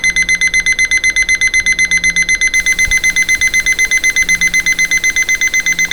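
A stuck bit runs from 2.54 s to the end of this recording of sounds, adding harsh, buzzy distortion and noisy quiet passages, likely from one data bit frozen at a weight of about -30 dBFS.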